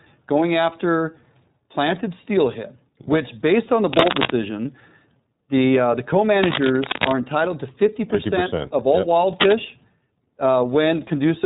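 Right from the start the speech carries iLBC codec damage. Nothing gets through above about 3.8 kHz, and there's a plainly rough, slightly synthetic edge. The frame-by-frame coding points to the 30 ms, 13.33 kbps mode. Then come three bursts of cable scratch noise: 3.93 to 4.34 s, 6.36 to 7.12 s and 9.40 to 9.59 s. They're uneven, scratchy rustles, a bit louder than the speech in the first and last bursts and about level with it in the middle one. That's likely a worn cable or connector being moved.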